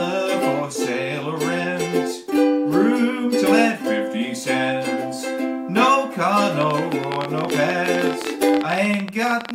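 From 6.61 s to 9.52 s a train of clicks sits over the sound: about fifty similar pulses at an uneven pace averaging 18.3 per second, peaking around 10 dB above the signal. They are likely from electrical interference or a faulty connection or power supply, and are heard as rapid irregular ticking.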